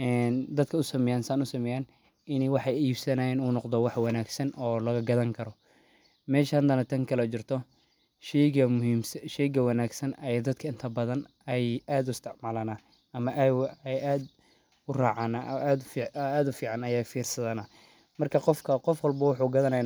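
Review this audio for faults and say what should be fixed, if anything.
Nothing needs fixing: the speech signal shows no technical faults anywhere in its run.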